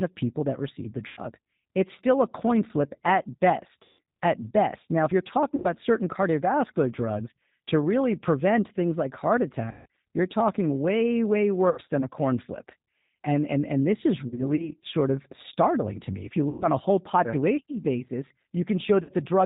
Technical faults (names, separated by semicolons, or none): G.729 codec; VoIP packet loss concealed by the speech codec